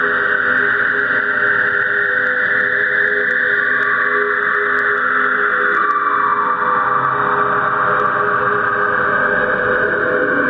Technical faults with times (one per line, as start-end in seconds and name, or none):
0.00-10.49 gain pumping